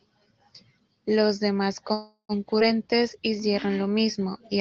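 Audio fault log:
1.93–2.32 s, call audio freeze: the sound stalls and its last moment is stretched into a fading buzz, reaching silence for about 90 ms. This is likely an empty jitter buffer waiting on delayed packets. About 358 ms is inserted, nothing is lost, and playback resumes where it stopped.
2.59–2.63 s, skip ahead: playback jumps forward with only a tiny gap of about 9 ms. Roughly 70 ms of audio is dropped and the two sides are butted together. That fits a jitter buffer shedding backlog and cutting its delay by about 50 ms.
2.83–3.21 s, jitter buffer slow-down: the speech drags at about 88% speed with unchanged pitch. The receiver repeats individual pitch periods to rebuild its reserve, adding 53 ms in all, so sounds come out drawn out.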